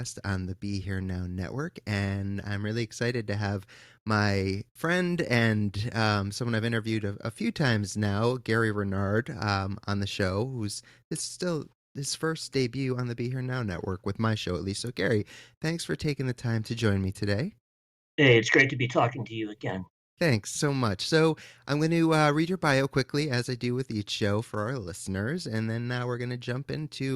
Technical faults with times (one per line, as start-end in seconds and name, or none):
none